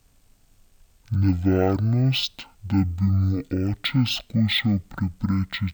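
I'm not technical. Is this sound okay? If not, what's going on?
No. From start to finish, the speech sounds slowed down to half speed and pitched a full octave lower, so the voice sounds deep, drawn-out and sluggish. This is a fault called stereo read as mono. A stereo recording stores left and right samples alternately, and here the player took both sides as one single channel. Every moment therefore lasts twice as long, and the pitch drops by twelve semitones.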